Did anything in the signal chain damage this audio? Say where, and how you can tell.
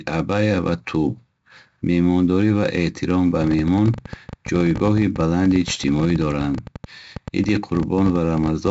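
Yes. A gritty hiss rides on every loud syllable and sharp onsets sound rough, with nothing above 7.7 kHz. That points to heavy 4-bit ADPCM compression at the codec stage: at 64 kbps, 4 bits per sample fits 16 kHz sampling, and the coarse prediction steps leave level-following noise.

From 3.42 s, just after "ва эҳтиром ба", to 8.68 s, a train of clicks ticks over the speech and the pauses, around 70 in all at about 13.3 per second, unevenly spaced and peaking a little above the speech. The likely cause is interference or a struggling interface in the analogue or converter stage.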